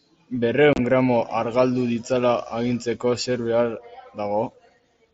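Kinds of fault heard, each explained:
Unconcealed Bluetooth headset packet loss: between 0.73 and 0.79 s, short voice packets travelling between headset and phone never arrived, and the gaps were left as silence rather than patched over. About 45 ms of speech drops out across a 60 ms stretch, the longest hole lasting 30 ms, which fits a handful of lost packets. The speech sounds briefly chopped with abrupt edges. The waveform shows abrupt flat gaps, and the spectrogram shows vertical blank slices through the mSBC band up to 8 kHz.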